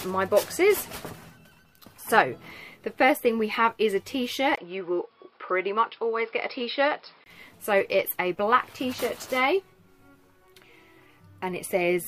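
From 4.56 to 7.26 s the sound dulls, cut off above 5.3 kHz after a 20 ms gap; the input likely switched to a poorer device.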